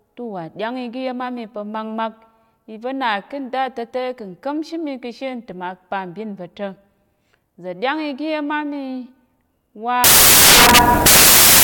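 At 10.04 s the speech collapses into loud, harsh broadband noise through to the end at 11.64 s. That's samples built from the wrong bytes: the reader misassembles each sample, so the jittery low bits land in the big part of the value.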